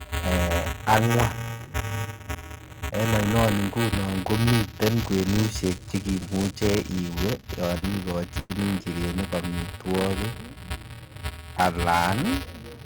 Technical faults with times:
0.00-12.85 buffer tearing
7.27-8.52 repeated stalls (stutter)
9.28-10.10 jitter buffer slow-down

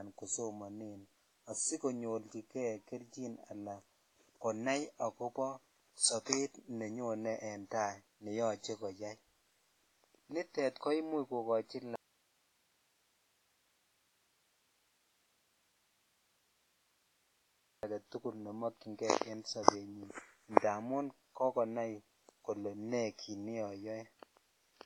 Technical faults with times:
0.00-24.85 WMA compression
11.96-17.83 audio dropout to a faint residue
19.63-19.68 pre-echo
20.54-20.57 pre-echo

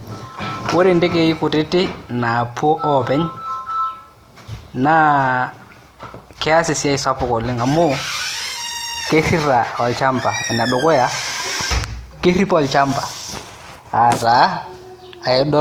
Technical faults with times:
0.00-15.61 Opus compression

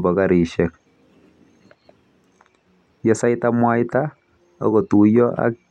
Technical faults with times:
none

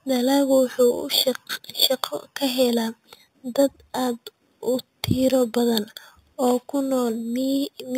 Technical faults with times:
0.00-7.98 imaging from sample-and-hold upsampling

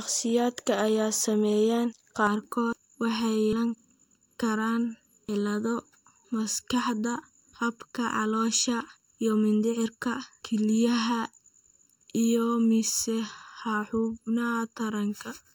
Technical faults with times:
2.27-15.55 channel delay (comb filtering)

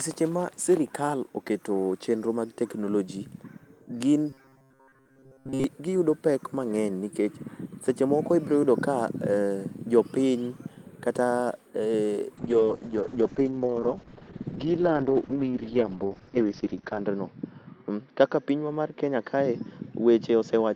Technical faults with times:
4.30-5.64 robotic sound from repeated short buffers
12.40-20.76 call bitrate drop

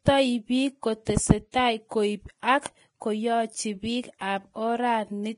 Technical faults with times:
0.00-5.37 Vorbis compression

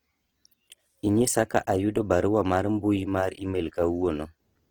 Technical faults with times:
0.00-4.71 Opus compression

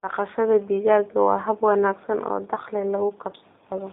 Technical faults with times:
0.00-3.92 G.729 codec

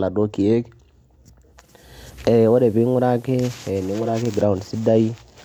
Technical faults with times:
1.49-4.27 digital radio blending to analogue

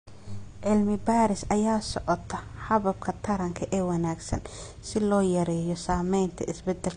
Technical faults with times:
0.00-6.96 low-bitrate audio saved at a high bitrate

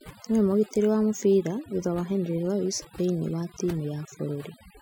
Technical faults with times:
0.00-4.82 overdone noise removal

